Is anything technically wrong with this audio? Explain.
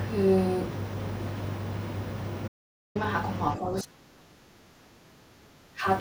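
Yes, there are two faults in this speech.

From 2.48 to 2.95 s there is an audio dropout to silence. The speech cuts off and nearly half a second is lost. The gap is silent with no room tone. The input likely disconnected while the recorder kept writing silence.

From 3.56 to 5.86 s the speech is suppressed in double talk. The voice dips, about 2 s in total, falling at worst by around 35 dB. An echo canceller likely mistook overlapping talk for echo and attenuated it.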